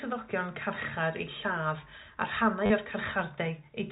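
At 0.75 s a brief packet loss with the last packet repeated fills a 10 ms gap: the receiver replays the previous chunk. From 2.66 to 2.70 s a 40 ms run repeats the same packet, a robotic stutter that buzzes near 100 Hz, consistent with 10 ms packets. The waveform shows an identical copied block, with a spectrogram comb over the telephone band that tops out at 4 kHz.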